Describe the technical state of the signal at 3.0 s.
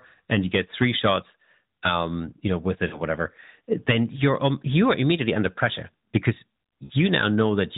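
At 3.0 s there are lost AMR speech frames, from 2.88 to 3.03 s, just after "you know with". About 40 ms of sound is missing, consistent with two 20 ms frames. The decoder repeats the last pitch and vocal tract settings with falling gain, so the sound briefly smears and warbles. On a spectrogram, the harmonics below 4 kHz stretch flat while the waveform envelope sags.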